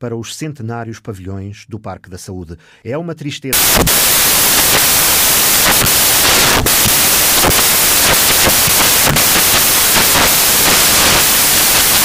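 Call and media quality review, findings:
Samples built from the wrong bytes, 3.53 s to end of clip. Speech abruptly replaced by loud broadband noise, close to white on louder passages. Probable component: sample reader/format parser. Byte offset, swapped order or wrong alignment pushes noisy low bits into the high-order positions. Spectrogram: flat full-band noise floor from 3.53 s. Waveform: dense noise-like samples.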